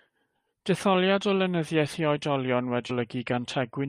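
Damaged data in a compressed stream appears at 2.89 s as a brief burst, about 18 ms long, in the speech. Corrupted bytes there left the decoder unable to read the frame correctly, so it lost sync and resumed at the next valid frame header.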